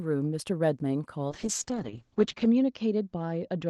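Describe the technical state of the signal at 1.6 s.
At 1.6 s the speech sounds rough and watery, with the top end dulled as the band narrows from 12 kHz to 8 kHz. This is a call bitrate drop, running from 1.3 s to the end: the Opus encoder was forced to code far more coarsely, consistent with a fall from about 32 kbps to roughly 7 kbps.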